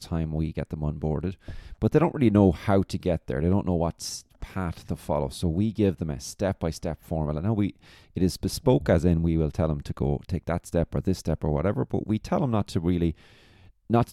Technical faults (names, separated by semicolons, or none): periodic USB or driver dropouts